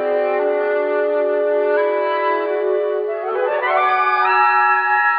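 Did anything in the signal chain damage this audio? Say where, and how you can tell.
No, nothing along the way from capture to playback seems to have harmed this one, so there's no stage to point a finger at.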